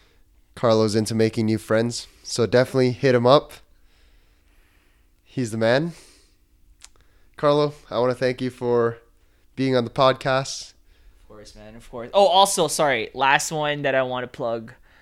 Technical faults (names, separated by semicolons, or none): dropped samples